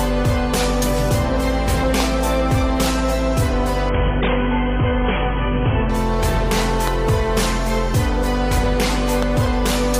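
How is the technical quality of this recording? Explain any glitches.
The technical quality is compromised by three loud pops and a two-second stretch where the stream drops to a lower bitrate.

Loud pops: a sudden voltage step, likely from a plug, switch, static discharge or driver glitch, was added to the signal. The result is a sharp pop roughly 15 dB above the sound at 2.00 to 2.02 s, then double pops at 6.88 to 7.11 s and 9.23 to 9.48 s, each with the audio continuing underneath.

Adaptive stream at a lower bitrate: from 3.89 to 5.89 s the connection slowed and the player switched to a leaner encoding, consistent with a fall from about 96 kbit/s to 16 kbit/s AAC. Nothing above 3.7 kHz survives, so the sound turns abruptly dull and artefact-laden without any gap.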